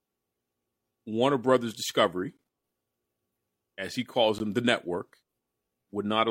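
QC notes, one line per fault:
2.37 s and 4.38 s, gap between stream segments: brief hard-edged silent holes of about 15 and 17 ms, two seconds apart, where segment timestamps don't quite meet. No sound is lost.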